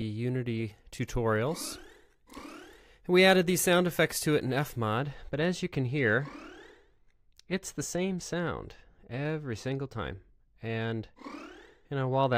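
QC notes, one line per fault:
4.97–12.37 s, channel delay (comb filtering): one channel lags the other by roughly 0.05 ms before mono summing, cancelling highs around 10 kHz and leaving the sound dull.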